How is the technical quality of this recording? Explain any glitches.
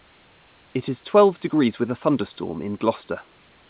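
No glitches turn up anywhere here; the speech comes through a call codec that keeps everything below about 4 kHz, with faint room noise sitting roughly 42 dB under it.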